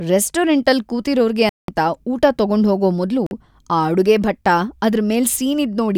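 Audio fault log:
1.49–1.68 s and 3.26–3.31 s, Bluetooth stall: the speech drops to silence for 190 ms after "ರೆಸ್ಟೋರೆಂಟಲ್ ಕೂತಿರೋರ್ಗೆ" and 46 ms after "ಊಟ ತಗೊಂಡ್ಹೋಗೋ ಮೊದ್ಲು", then resumes, likely because the headphone buffer ran dry while delayed packets were resent.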